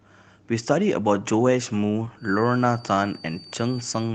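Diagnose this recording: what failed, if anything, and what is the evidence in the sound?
A feedback whistle starts at 2.15 s and lasts to the end. It is a thin, single-pitch 4.6 kHz tone, roughly 25 dB under the speech. The likely cause is an acoustic loop from loudspeaker to microphone, sitting just short of runaway oscillation.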